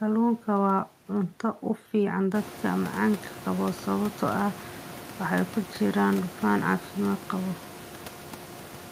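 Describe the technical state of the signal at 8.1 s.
At 8.1 s the signal is intact, with no fault present, only the room's own background noise sitting about 14 dB below the speech.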